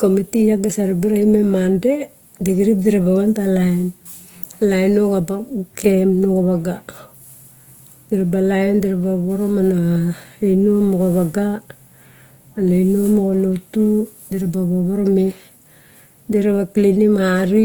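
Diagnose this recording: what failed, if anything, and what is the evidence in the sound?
Opus compression throughout, a codec fault: the speech sounds grainy and rough but stays fullband, likely music-mode Opus near 24 kbps filling starved bands with noise.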